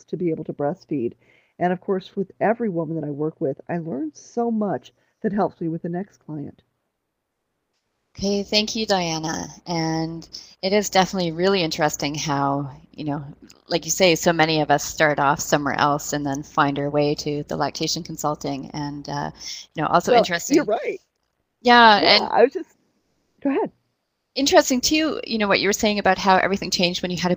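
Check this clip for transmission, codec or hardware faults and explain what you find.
One fault shows up, comfort noise in place of the background. From 24.05 to 24.35 s the real background turns into a flat, featureless hiss about 4 dB quieter, likely because discontinuous transmission, such as Opus DTX, stopped sending in the pause and the receiver synthesised noise.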